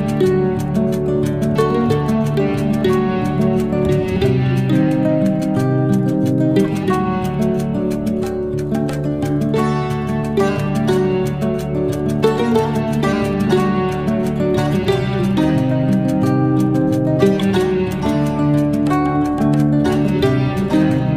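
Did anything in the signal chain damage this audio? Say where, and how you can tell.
No, nothing along the chain seems to have damaged this audio, and I can't hear any stage leaving a mark on it.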